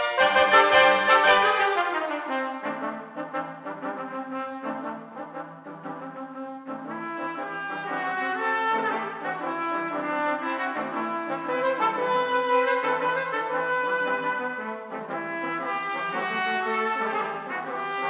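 Aliasing runs throughout: the audio was downsampled without an anti-alias filter, likely from 44.1 kHz to 8 kHz, so content above 4 kHz folds back as gritty, metallic tones roughly 20 dB below the signal.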